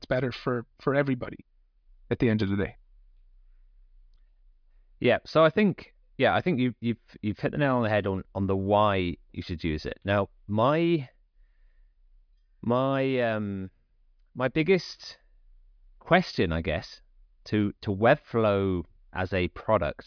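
No technical faults are audible.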